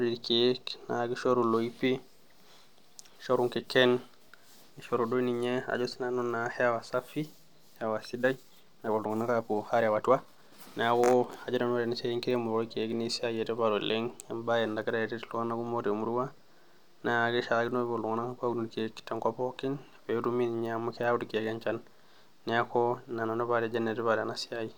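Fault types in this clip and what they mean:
Time-stretched section: from 8.09 to 10.61 s the speech suddenly runs about 1.38 times faster while its pitch stays unchanged, sounding rushed; this is likely software compressing the passage to fit a length by dropping short slices of audio.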